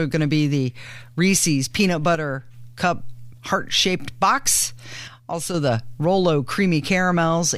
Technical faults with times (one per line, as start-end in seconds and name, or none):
2.15-2.54 one channel drops out
5.08-5.54 one channel drops out